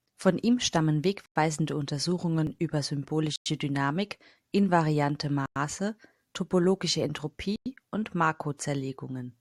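Right after "ihm stammen" at 1.26 s there's a gap between chunks: a 100 ms hole at the join into the next 2-second chunk. At 2.47 s, an overlap between stream segments trims a sliver of real audio at a 6-second segment join, so the waveform jumps and you hear a tiny skip. The chunk gaps then return, each 100 ms, at 3.36, 5.46 and 7.56 s.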